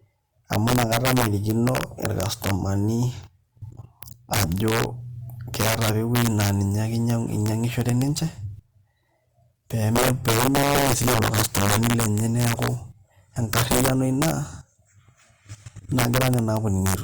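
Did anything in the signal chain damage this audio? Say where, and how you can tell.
Yes. Integer overflow damages the whole clip at the sample-format or integer gain stage. Speech was driven about 11 dB past full scale, and the few peaks over the limit wrap to the opposite sign, giving violent cracks far harsher than the flattened buzz of ordinary clipping.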